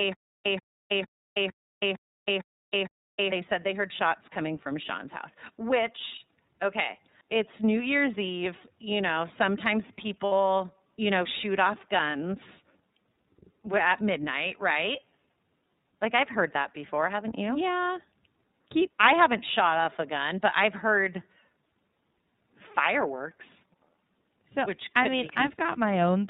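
Throughout, the speech carries plainly audible iLBC codec coloring: band-limited to 4 kHz, slightly rough and synthetic, consistent with the 30 ms, 13.33 kbps mode. From the start to 3.32 s, before "said they heard shots", a stutter with silent gaps repeats a 133 ms fragment seven times every 456 ms, separated by 322 ms of digital silence. This is likely a stalled stream replaying its last buffer. Lost iLBC frames appear at 10.26 s, after "know sometimes", filling 60 ms (about two frames), and at 14.73 s, after "at midnight", filling 30 ms. Each gap sounds like a briefly held, buzzy vowel that recovers immediately.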